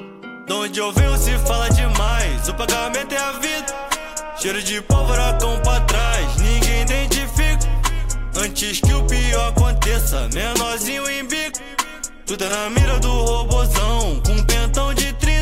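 Nothing stood out as a technical problem on listening to this audio.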